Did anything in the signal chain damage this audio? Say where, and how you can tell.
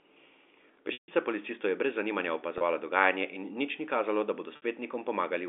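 Yes, packet loss with pitch repetition at the network stage: a buzzy held tone at 2.58–2.61 s, and held tones fading into silence at 0.93–1.08 s and 4.56–4.62 s, where repeated pitch periods bridge 30, 150 and 60 ms gaps.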